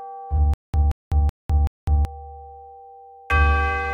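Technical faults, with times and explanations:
0.54–2.05 s, stutter with silent gaps: the player or stream likely stalled and, at each retry, replayed the last fragment it held before running empty again. A 176 ms burst of the same sound returns four times at an even 379 ms period, each repeat followed by 202 ms of dead digital silence. The new audio that belonged in this span is lost, so the sound jerks in place mechanically before moving on.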